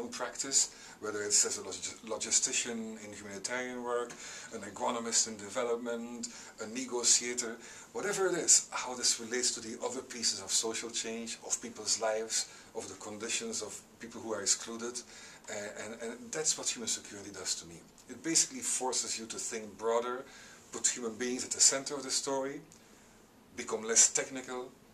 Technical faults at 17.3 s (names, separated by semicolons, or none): none